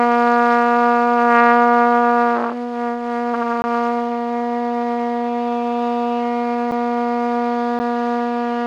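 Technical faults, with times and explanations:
3.62–3.64 s, 6.71 s and 7.79 s, block of digital silence: the sound drops abruptly to nothing and returns, heard as sharp ticks with a brief hole at 3.62 s. Samples were replaced by zeros for 20, about 7 and 10 ms, likely because the output buffer wasn't filled in time.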